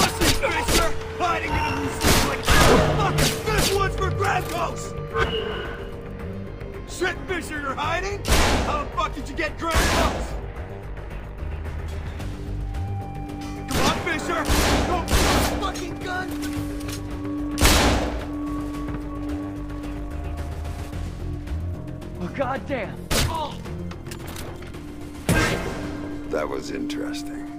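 No technical faults can be heard anywhere in the audio, and the signal holds steady and continuous throughout.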